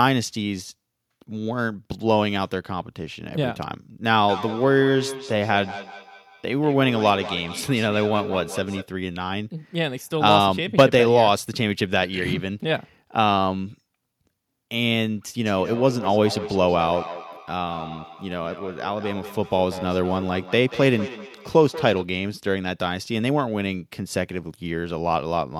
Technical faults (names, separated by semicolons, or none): feedback echo between two devices